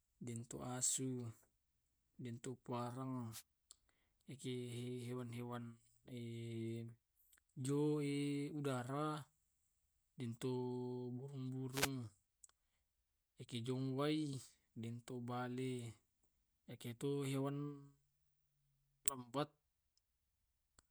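A short swish of static cuts across the speech at 3.30 to 3.43 s, and a slightly longer burst follows at 11.71 to 11.90 s, each lasting well under a quarter of a second. These are wireless microphone noise hits: the analogue FM radio link momentarily faded as reflected signals cancelled, so the receiver's own noise surged up before the signal recovered.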